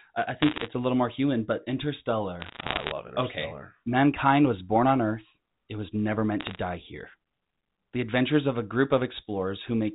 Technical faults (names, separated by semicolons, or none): bit errors on a digital phone line